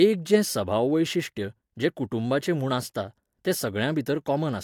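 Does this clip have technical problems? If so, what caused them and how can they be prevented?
No, this clip has no technical problems, so there is nothing to prevent.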